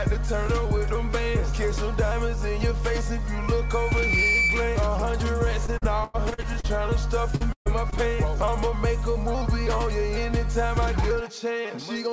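From 3.60 to 4.92 s there's loudspeaker feedback squeal. A mic is picking up the speaker it feeds, and at 2.3 kHz the loop gain tips over one, so that frequency keeps feeding itself. You hear a single tone swell up over roughly 0.7 s until it sits around 5 dB above the rest of the audio, and then it drops away.

Next comes repeated packet loss, giving that robotic sound, in two stretches. From 5.66 to 6.72 s there are ten holes, the longest 99 ms, and about a quarter of the stretch is patched over. From 7.36 to 8.00 s there are five, the longest 133 ms, with close to a third concealed. Each gap gets filled by stretching the last bit of sound, so it comes out choppy with pieces missing. Underneath, the call path has nothing above 8 kHz, which fits a wideband codec like G.722.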